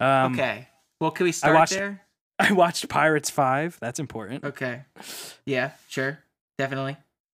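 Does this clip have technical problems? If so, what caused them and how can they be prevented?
No, there are no technical problems in this clip.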